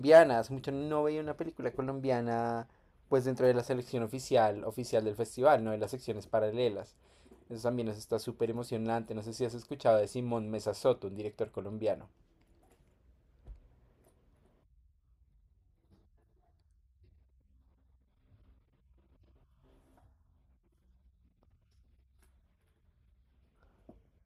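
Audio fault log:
No faults can be heard in this speech recording. Nothing in it calls for a timed entry.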